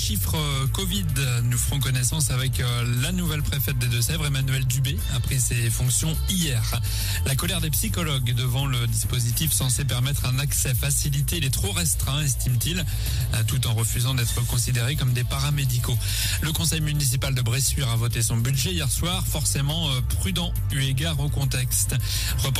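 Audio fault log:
No fault to log for this audio.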